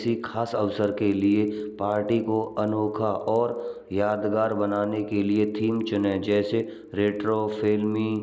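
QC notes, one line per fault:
Throughout: resampler restarted on every block. A faint tick repeats at 25 Hz, one per 40 ms block, and adds up to a low buzz under the speech. Each block was converted from 24 kHz to 16 kHz on its own, so the filter lacked real neighbouring samples at every edge and left a small error there. Unlike mains hum, the buzz stops in pauses and rises with signal level, with no gap in the sound.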